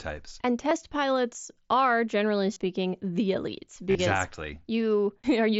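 At 0.69 s, just before "pilots are generally", a brief concealed Bluetooth headset packet loss patches over about 15 ms. Around 2.53–2.59 s, after "pilots are generally", losses scattered over 60 ms, with the longest run about 30 ms, produce a buzzy held tone and a slight warble as real audio resumes. A similar buzz follows "the elites" at 3.91–3.95 s. Each gap is filled by repeating recent waveform at full level rather than dropping to silence, which sets this apart from a plain dropout.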